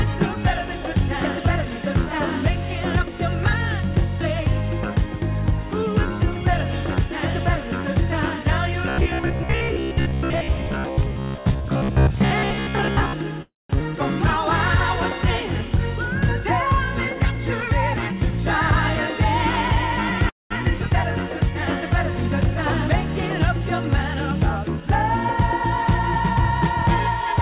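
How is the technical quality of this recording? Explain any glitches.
The recording has four glitches over three fault types, all on a telephone-band call path that cuts everything above 4 kHz, which fits G.711 mu-law coding.

From 8.89 to 13.18 s there is robotic sound from repeated short buffers. A rigid 66.7 Hz buzz fits 15 ms chunks being replayed, with most of the real sound skipped. Late-arriving audio is the likely cause.

At 13.42 to 13.71 s and 20.29 to 20.52 s there are call audio freezes. Each is the last sound carried on and fading, and then about 170 ms and 180 ms of silence, probably from an emptied jitter buffer. Nothing is lost, but these add 274 ms and 212 ms of delay.

From 24.63 to 26.17 s a jitter buffer speed-up plays the sound at 102% speed with unchanged pitch, as about 40 ms of pitch periods are trimmed away.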